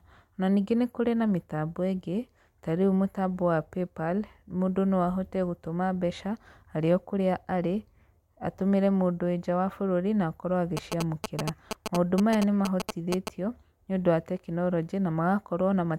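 From 10.77 to 13.29 s, just before "nĩũndũ wa tekinoronjĩ", there's a burst of GSM signalling interference: a nearby 2G phone pinging the network, its radio bursts rectified by the audio circuitry. You hear that galloping dit-dit-dit of short 217 Hz buzzes, sitting only a few dB under the speech.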